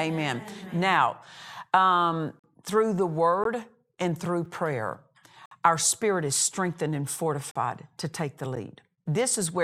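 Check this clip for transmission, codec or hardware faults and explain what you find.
Gaps between stream segments break up this speech about once a second. Segment timestamps don't quite line up, so the player pads each seam with hard-edged silence; nothing's actually lost. They fall at 2.39–2.44 s (44 ms, right before "through the"), 3.44 s (16 ms), 4.45 s (4 ms), 5.46–5.51 s (56 ms), 7.51–7.56 s (42 ms) and 8.56 s (10 ms, just after "to take the").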